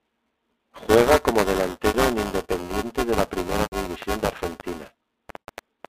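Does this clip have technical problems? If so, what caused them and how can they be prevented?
Yes. Buffer tearing runs through the whole speech clip as a robotic buzz at 345 Hz, which fits a 128-sample buffer. The writer and reader have drifted, so roughly a fifth of each buffer replays audio about 10 ms stale. Keep the write pointer safely ahead, or enlarge the buffer.

Packet loss with pitch repetition hits at 1.88–1.94 s (60 ms lost), 3.62–3.72 s (100 ms) and 5.48 s (80 ms). The receiver repeats the last pitch period, so you hear a held, buzzy tone fading out. Use a jitter buffer plus forward error correction or retransmission.

A train of clicks runs from 4.02 to 5.86 s: about seven irregular pops, roughly 3.8 per second, poking out above the speech on the telephone line. The likely cause is interference from nearby equipment or a faulty connection or power supply. Shield cables and separate noisy gear.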